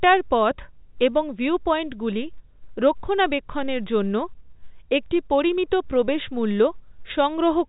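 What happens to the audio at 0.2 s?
Nothing goes wrong at 0.2 s: the speech there is intact, carried through G.711 telephone coding with its narrowband 4 kHz ceiling and no audible fault.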